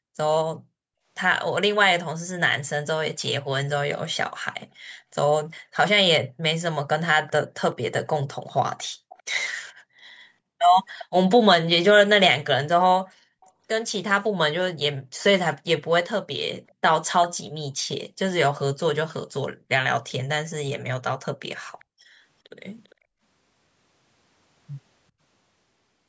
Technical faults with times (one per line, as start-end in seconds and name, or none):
7.27-7.32 echo leak
8.34-9.23 echo leak
10.99-11.05 echo leak
13.41-13.50 echo leak
16.68-16.73 echo leak
21.79-21.85 echo leak
22.00-22.14 background gated by the echo canceller
22.84-22.95 echo leak